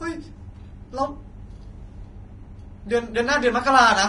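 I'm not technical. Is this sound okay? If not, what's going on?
No. Throughout the speech it sounds hissy and grainy, with nothing above about 10.6 kHz, which points to heavy Vorbis compression as the likely cause. Unlike steady background hiss, this grain follows the speech itself.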